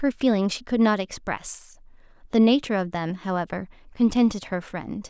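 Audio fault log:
No faults heard.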